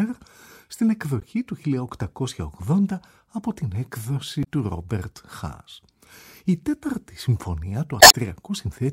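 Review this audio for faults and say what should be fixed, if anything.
Damaged data in a compressed stream produces three short glitches: 1.20 to 1.25 s, 4.40 to 4.47 s, and a longer one at 7.98 to 8.15 s. At each point the encoded bytes are wrong or missing, so the decoder misreads those frames, loses sync and hunts for the next valid frame header. The result is a brief chirp, squawk, click or short hole instead of the intended audio. Preventing this means checking the file or stream with checksums and error detection in transport, and re-fetching or re-encoding from an intact source.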